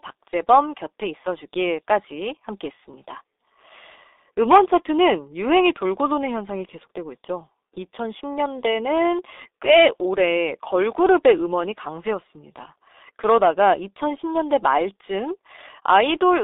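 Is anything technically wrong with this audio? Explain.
Yes. The speech runs through a G.723.1 codec for its whole length. The band is squeezed between about 300 Hz and 3.7 kHz, so nothing above that reaches the ear. The coder works in long frames and rebuilds the voice from a slowly updated model. The heavy damage points to a rate near 6 kbit/s. The result is muffled and hoarse. Consonants smear together and lose their edges.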